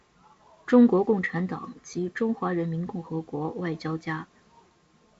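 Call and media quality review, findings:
No faults found on this speech call.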